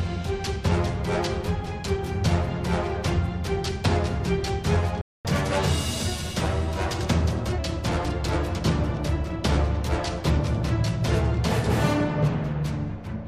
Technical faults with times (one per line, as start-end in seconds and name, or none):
5.01-5.25 playback stall
5.25-7.58 catch-up at higher speed